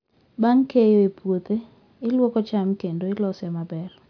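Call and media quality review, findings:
Nothing to flag on this speech recording; no faults heard anywhere in it.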